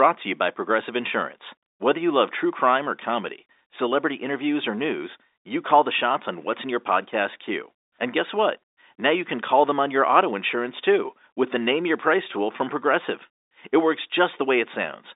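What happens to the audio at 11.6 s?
Nothing goes wrong at 11.6 s: the speech continues intact through that moment, carried on the same narrow telephone band as the rest of the G.711 line.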